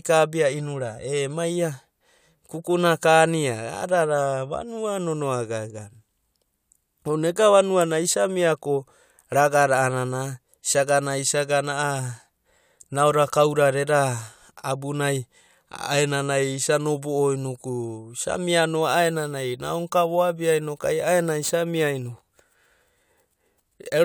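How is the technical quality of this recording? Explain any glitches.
There's one clear problem, and it sits right at the end of this speech clip. From about 18.82 s to the close at 24.05 s you get crude rate conversion. It sounds like samples were simply repeated to stretch the stream to a higher rate, with no interpolation or filtering, and the fizz fits a jump from 32 kHz to 44.1 kHz. That leaves a stepped, jagged waveform whose error repeats in a fixed pattern, only around 20 dB below the speech. You hear it as a gritty, inharmonic buzz riding on the voice, strongest on louder and brighter sounds.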